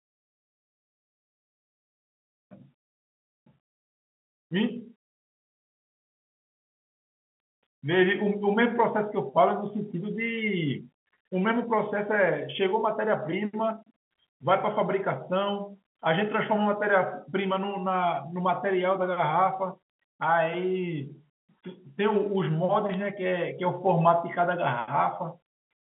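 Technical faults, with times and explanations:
22.94 s, bit errors on a digital phone line: a brief burst of sharp ticks lasting a couple of milliseconds, consistent with a few flipped bits, roughly one or two in a thousand, each corrupting a single sample in the 150 to 3400 Hz phone-band signal. Unlike a dropout, no sound goes missing.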